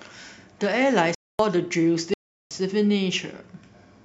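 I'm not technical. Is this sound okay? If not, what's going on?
No, not quite. The speech drops out completely twice, from 1.15 to 1.39 s and again from 2.14 to 2.51 s, about a quarter second and a bit over a third of a second. Each one is a block of digital silence: a chunk of audio replaced by pure nothing, typically because the software didn't deliver the next piece of sound in time. The cut starts and stops abruptly, with no fade in or out.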